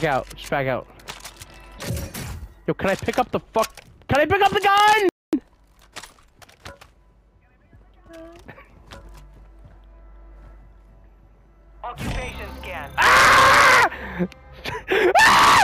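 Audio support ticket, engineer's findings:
Playback stall at 5.09 s. Output drops to silence mid-flow and resumes at 5.33 s. Gap of about 240 ms, long enough to register as a clear hiccup, not a click. Sound picks up after the gap and carries on. Probable component: player output path. Likely cause: buffer underrun or a blocked playback thread, with the device starved of samples until the feed recovered. Single event. Check buffer headroom and thread scheduling around that point.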